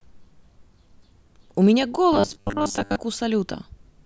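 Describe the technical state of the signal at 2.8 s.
At 2.8 s the signal is inside a stretch of robotic sound from repeated short buffers, running from about 2.13 s to 2.96 s. The speech there is a rigid, metallic buzz fixed at 100 Hz that only loosely follows the words. The likely cause is fresh audio arriving too rarely, with the last short block looped to fill the gap. A 100 Hz buzz fits a block about 10 ms long, and most of the real signal in this span is skipped.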